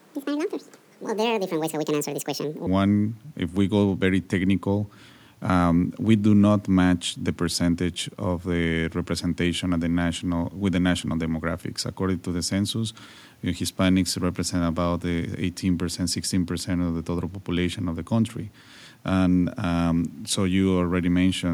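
From 0.00 to 2.67 s, a section at the wrong speed runs 1.77 times fast, likely from a clock mismatch. Pitch rises about ten semitones with the tempo, unlike a pitch-only shift.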